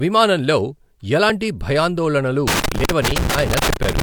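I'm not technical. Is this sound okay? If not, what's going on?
No. At about 2.48 seconds, right after "విమానంలో ఎలాంటి భయాందోళనలు", a loose connector crackle starts. It runs almost to the end, until about 4.02 seconds. It sounds like irregular scratching and crackle over the speech. A worn or dirty contact, in a plug or cable, keeps touching and losing touch. Each break chops the sound for an instant. Each reconnection can add a small pop.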